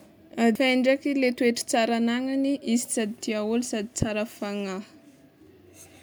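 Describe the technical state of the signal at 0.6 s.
At 0.55 s, compressed frames are skipped: about three 85 ms frames, around 300 ms of speech, vanish, leaving an abrupt jump ahead in the speech and a visible spectrogram discontinuity.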